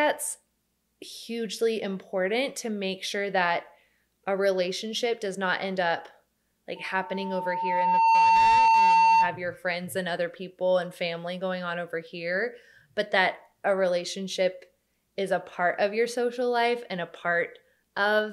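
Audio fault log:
6.76–9.43 s, loudspeaker feedback squeal: a pure tone near 905 Hz appears and swells over roughly a second and a half until it sits about 10 dB above the rest of the sound, and it stops at 9.43 s. A microphone is hearing the loudspeaker it drives, and at 905 Hz the round trip through the loop amplifies more than it loses, so that one frequency keeps feeding itself and climbs.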